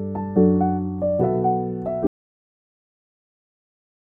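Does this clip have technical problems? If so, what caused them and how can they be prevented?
Yes. There's an audio dropout to silence starting at 2.07 s, and it never recovers: the sound cuts off abruptly and the rest of the clip is dead silence, with no room tone at all. That flat silence tells you the input itself went away while the recorder kept writing, most likely a disconnected device, a failed link or an accidental mute. To prevent it, secure cables and connections and keep an eye on input meters throughout the take.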